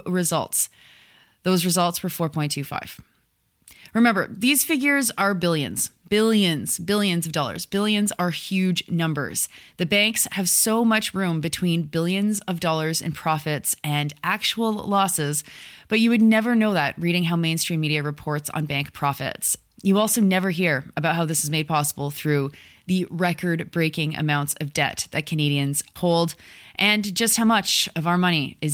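A straightforward speech recording with nothing technically wrong to point to anywhere in it.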